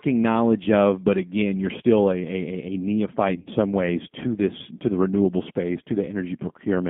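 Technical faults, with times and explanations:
throughout  G.729 codec: The audio is confined to a line band of roughly 150 Hz to 3.5 kHz, and the codec damage is plainly audible. Speech comes through slightly rough and synthetic, consistent with an 8 kbit/s G.729A coder rebuilding each frame from a vocal tract filter, a pitch predictor and a few pulses. A simple telephone band-limit would dull the sound without this grainy, buzzy texture, which comes from the sparse pulse excitation.
3.36–3.48 s  VoIP packet loss concealed by the speech codec: Just before "some ways to this", the speech smears into a brief buzzy tone or coloured noise that fades, instead of dropping to silence. About 70 ms of audio is missing, scattered across roughly 100 ms, with the longest gap about 30 ms. That pattern fits several lost 10 ms frames. The decoder filled each gap by repeating its last pitch and filter at falling gain, which is why it sounds stretched rather than like a clean cut or click.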